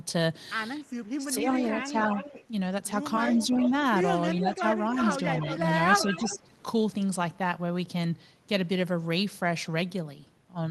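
Echo leak at 1.06 to 2.45 s, 3.33 to 3.71 s and 4.45 to 6.38 s in this speech recording: a delayed copy of the voice returns 342 ms late, about 10 to 15 dB below the direct speech, likely because the far end's echo canceller let loudspeaker pickup back into its microphone. Speech suppressed in double talk at 1.17 to 1.97 s and 4.35 to 6.48 s: the talker dips by roughly 10 dB, in pieces totalling about half a second and then under a second, likely because the canceller couldn't separate the talker from the echo and turned both down.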